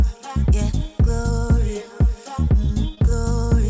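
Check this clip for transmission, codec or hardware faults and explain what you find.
One transmission fault is audible. The sound is band-limited at 8 kHz, which fits the wideband G.722 call path.

2.95 to 2.99 s: short concealed packet loss. About 20 ms never arrived in time, and the receiver extrapolated the preceding sound to fill it, leaving a brief smear or wobble.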